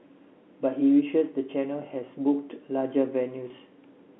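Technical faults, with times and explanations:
3.48–3.50 s, packet loss with pitch repetition: a 20 ms gap, which fits one lost packet, is bridged by looping the last pitch period, so the sound briefly holds with a buzz.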